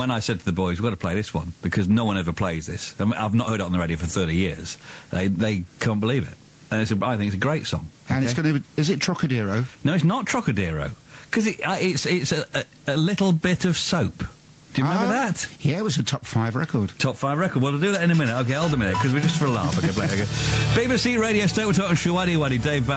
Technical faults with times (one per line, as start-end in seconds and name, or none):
0.00-22.97 gain pumping